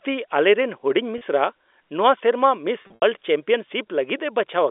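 Speech over a telephone-band line briefly buzzes and holds at 1.18–1.21 s, then holds and fades after "ᱥᱮᱨᱢᱟ ᱢᱤᱥ" at 2.82–3.02 s. This is packet loss with pitch repetition: 30 ms, then 140 ms scattered over 200 ms, were bridged by repeating pitch periods.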